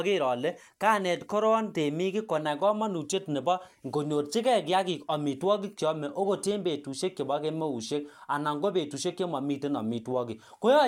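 No technical faults can be heard anywhere in this recording.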